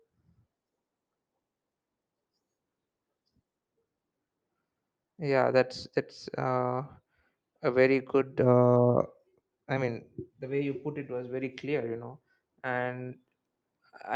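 No technical faults are audible.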